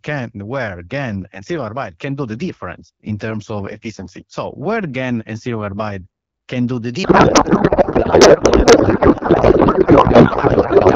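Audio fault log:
7.03 to 10.95 s, codec payload misread: the speech turns into garbled noise and warble that barely follows it, continuing to the end. The decoder reads octet-aligned AMR frames as bandwidth-efficient, so every field sits in the wrong bit positions.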